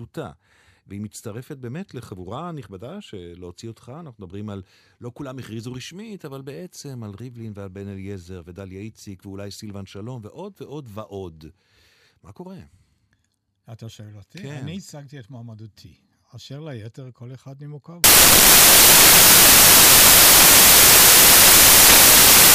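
From 18.04 s to the end, the speech turns into loud, harsh broadband noise: samples built from the wrong bytes, low-order bits landing in the high-order position.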